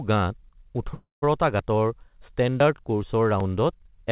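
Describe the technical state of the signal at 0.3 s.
At 0.3 s the speech is intact, with no dropout, glitch or distortion, only the steady narrowband character of a G.711 mu-law call path with nothing above 4 kHz.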